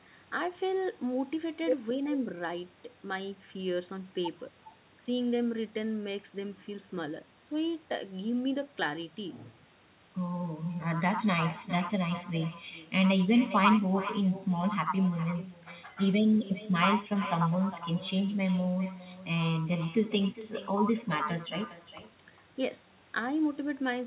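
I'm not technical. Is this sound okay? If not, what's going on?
No. All the way through, every bit of speech is followed, a little under half a second later, by a quieter, thinner copy of itself. That's echo with no canceller: the person on the other end was on a loudspeaker, their microphone picked the call back up, and nothing stripped it out, so the speech travelled there and back before returning. The muffled, phone-like tone is simply the call line.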